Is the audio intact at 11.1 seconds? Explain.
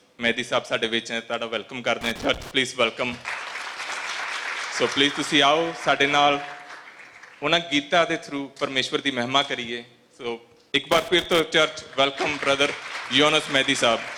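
No. At 11.1 seconds the sound falls inside a burst of loose connector crackle running from about 10.92 to 11.40 s. A worn or dirty contact somewhere in the signal path is shifting, so the connection keeps making and breaking in quick, uneven succession. That interrupts the signal in tiny fragments, giving roughly half a second of irregular scratching crackle over the audio.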